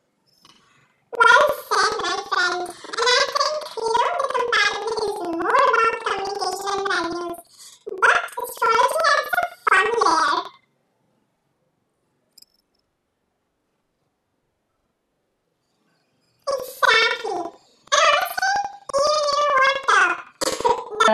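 Speech clip with planar audio read as interleaved throughout: each 85.3 ms block, consistent with 4096-sample blocks, replays at double speed, so speech sounds an octave high with an 11.7 Hz flutter.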